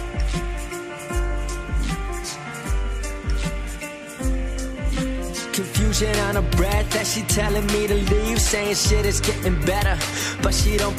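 No audible defects: no dropouts, clicks, distortion or timing errors anywhere in the recording.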